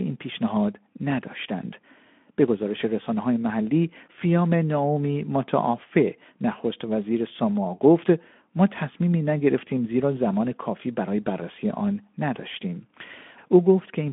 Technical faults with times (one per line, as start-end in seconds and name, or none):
none